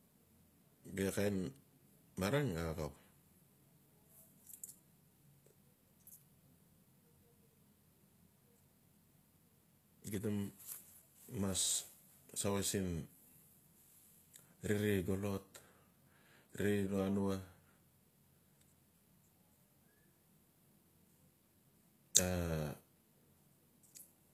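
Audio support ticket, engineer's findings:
HE-AAC compression, throughout. Plainly audible gritty, lispy sibilance, nothing above 14.9 kHz. Likely spectral band replication copying lower bands upward at a low bitrate, consistent with 24 kbps.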